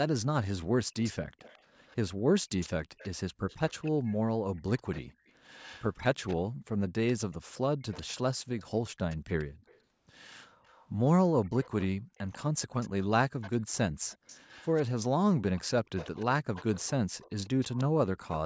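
A speech recording carries an echo leak: a faint copy of the voice trails the original by 144 ms, about 20 dB down, from 0.97 to 1.96 s, 2.6 to 10.87 s and 15.57 to 18.37 s, and about 25 dB down from 11.43 to 14.82 s. The likely cause is a loudspeaker on the far end whose echo canceller let some of the voice through. Room reverberation would smear into a continuous tail, but this is a distinct, fixed-delay repeat.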